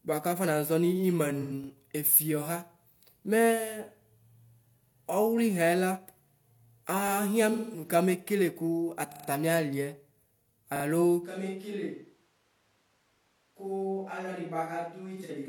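Right at 1.42 s there's AAC frame loss with concealment: about 85 ms, roughly two AAC frames' worth, went missing and the decoder papered over it by reusing the last good spectrum. You hear a short smeared, noisy patch in the speech. Just after, at 1.64 s, comes the first repeated buffer: a 40 ms chunk didn't arrive in time, so the device played the previous one again. It's a quick stutter with a hard seam. The same thing happens at 7.08 s.

The second concealment runs from 7.52 to 7.89 s. That's about 213 ms, around five frames, of filled-in sound before real audio returns. Then the buffer repeats come back harder. From 9.12 to 9.28 s the same 40 ms slice plays four extra times, which gives a longer stutter. From 10.76 to 10.84 s it repeats twice more.

At 11.24 s the sound suddenly goes roomy and hollow, with thinner bass, a level drop of about 10 dB, and room noise sitting only about 35 dB under the speech. 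That's most likely a switch to a distant microphone, and it stays that way to the end. One more single repeated buffer lands at 13.16 s. From 15.16 to 15.30 s there's a last bit of AAC concealment, scattered in short gaps, the longest about 40 ms, so it comes across as a brief smeared, noisy patch.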